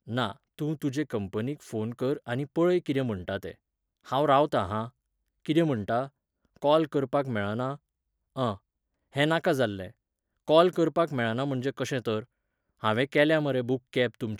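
A short recording of speech, with no technical fault to be heard anywhere in it. Nothing in the signal chain stands out at any point, so there are no times or causes to give.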